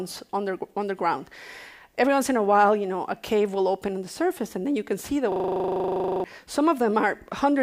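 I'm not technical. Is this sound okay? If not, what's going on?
No. At 5.32 s the computer briefly froze and the sound hardware kept replaying its last 40 ms of audio, a system hang loop, until 6.24 s. That tiny piece repeats about two dozen times, 25 times a second, making a stuck buzz, and roughly a second of the real sound is lost.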